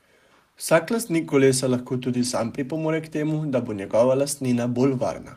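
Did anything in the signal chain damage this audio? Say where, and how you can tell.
Yes: on the network, several packets were lost and rebuilt from error correction, so from 2.17 to 2.43 s the speech turns rougher and noisier without any gap.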